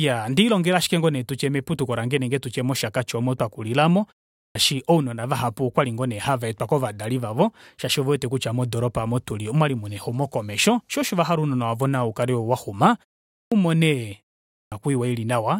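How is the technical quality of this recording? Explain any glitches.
The recording has one recurring fault: clipped starts after a pause. It happens three times, at 4.38 s, 13.34 s and 14.54 s. The first comes just after "oomo omo twakulila aamo" and before "ounona vahapu okwali ngoo". Each follows a short pause of about 0.34 to 0.39 s. The output device drops into a sleep state in the silence and needs time to wake. About 0.17 to 0.18 s of sound is lost each time, so speech bursts in abruptly without its opening sounds.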